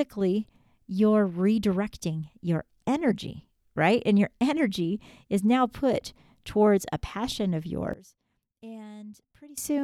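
Right after "towards a passion of", at about 7.93 s, the speech suddenly drops by about 22 dB to a faint copy, with the centred body of the voice almost gone. It stays like that until about 9.58 s. That's the classic sign of one channel inverted: the likely cause is one stereo side with flipped polarity, so when the two are summed to mono, everything they share cancels and only a faint difference signal remains.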